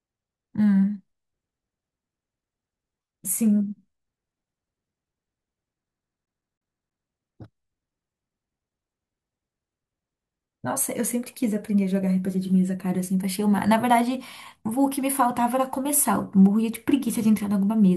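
From 5.93 to 7.06 s the speech is caught in a CD stuck on one turn: a 160 ms slice repeats 7 times, with brief mutes at each laser jump.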